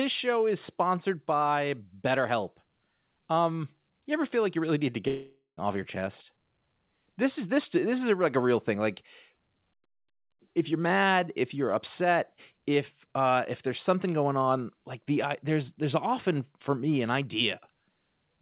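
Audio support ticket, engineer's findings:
Fading buzz after "you really need to" at 5.08 s, decaying to about 0.13 s of silence, audio resuming at 5.59 s on "off your chest" with roughly half a second lost. Long network dropout, likely; receiver concealment extends the last sound before going quiet. Band-limited to 4 kHz by the G.711 A-law call path.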